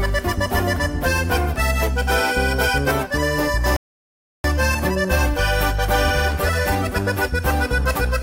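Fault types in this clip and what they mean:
rebuffering stall: the sound goes silent from 3.76 to 4.44 s, then resumes exactly where it left off, because the player's buffer emptied and waited for more data.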